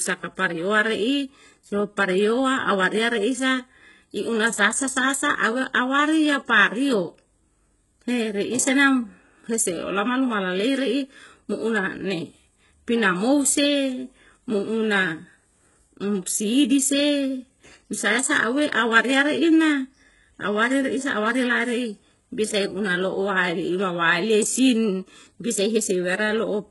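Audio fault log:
Throughout, HE-AAC compression is the likely cause. The speech's treble is rebuilt by copying lower bands upward under a coarse envelope, so s sounds turn gritty and metallic, and nothing remains above 11.5 kHz. The heavy damage fits a bitrate around 12 kbps.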